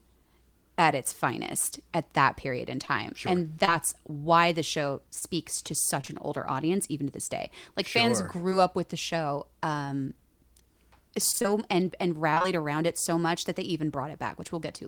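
Short concealed packet loss occurs at 2.85–2.89 s just after "at that period in", 3.65–3.69 s just before "why the show", 5.19–5.23 s, 6.01–6.10 s (two back-to-back holes), and 8.50–8.53 s between "sure fans" and "up with the show". Each time about 20 ms of audio, which fits a single 20 ms packet, arrived too late or not at all. The decoder extended the preceding sound to cover it, leaving a brief smear or wobble.

Repeated packet loss (robotic sound) hits 11.31–11.46 s and 12.30–12.46 s. In each stretch four holes of roughly 20 ms follow one another, so concealment patches about half the span. The sound turns choppy, with fragments missing.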